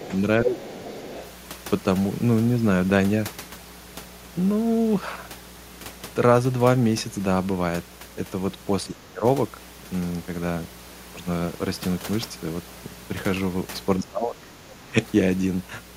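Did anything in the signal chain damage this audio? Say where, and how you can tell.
Yes. In the analogue wiring there is mains hum: a steady 60 Hz tone, about 20 dB below the speech, runs through the whole clip. Its fixed pitch and constant level, unaffected by the speech, point to a ground loop rather than codec noise.

In call processing, speech suppressed in double talk shows up at 0.00–0.12 s (a shallow dip of about 5 dB), 0.44–0.83 s (about 10 dB), 8.86–9.24 s (about 25 dB) and 14.02–14.95 s (about 20 dB). The likely cause is an echo canceller turning the talker down during overlap.

Also in call processing, the other side's voice leaks through from 0.57 to 1.3 s as a second voice about 15 dB under the speech. It overlaps the 0.44–0.83 s dip, which fits echo-canceller residue from the far end's loudspeaker rather than crosstalk between wires.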